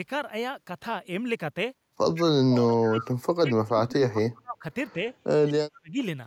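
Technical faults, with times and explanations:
2.14–2.23 s and 2.96–3.11 s, echo leak: a faint copy of the speech returns about 158 ms late, roughly 15 to 20 dB down, likely from a far-end loudspeaker the echo canceller didn't fully cancel.
2.23–3.02 s, 3.37–4.64 s, 4.94–5.01 s and 5.47–6.0 s, speech suppressed in double talk: the speech dips or cuts out in pieces, by about 35 to 40 dB except a slight dip at 4.94 s, likely because the canceller mistook overlapping talk for echo.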